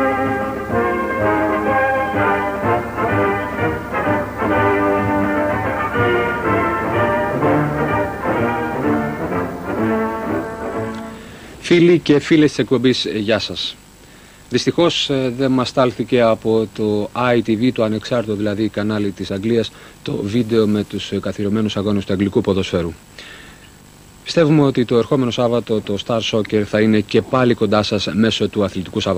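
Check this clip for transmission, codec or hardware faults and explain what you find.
One fault is present, a short stretch of Wi-Fi interference.

From 18.97 s to 20.97 s, a steady, even ticking sits underneath the audio, repeating about ten times a second and roughly 35 dB below the main sound. The spacing, 102.4 ms between ticks, matches a Wi-Fi beacon. A nearby radio's periodic transmissions are being picked up and rectified by the audio circuitry, turning each beacon into a small audible click for those two seconds.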